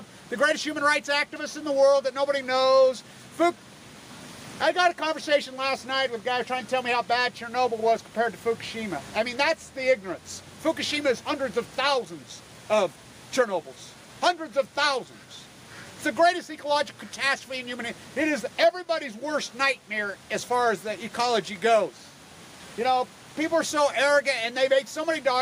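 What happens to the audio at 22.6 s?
Nothing goes wrong at 22.6 s; the audio carries on intact through that moment, with no dropout, click, glitch or other fault to be heard.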